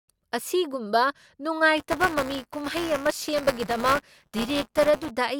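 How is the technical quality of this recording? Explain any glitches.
The recording has one clear fault: buffer tearing from 1.77 s to 5.11 s. Writer and playback hardware slipped, so a small slice of each buffer replays audio about 10 ms old, giving a 200 Hz robotic buzz over the speech.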